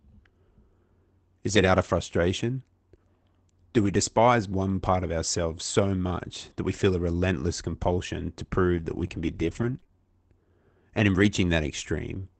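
Scattered short gaps run from 1.47 s to 11.25 s of the speech. There are about four brief dropouts, none much longer than a couple of hundredths of a second, where packets went missing or arrived too late. The receiver covered each hole by stretching the preceding sound forward. Instead of silence you hear quick ticks, smears or hiccups, roughly 70 ms of patched audio in all, within a call path whose top end stops near 8 kHz.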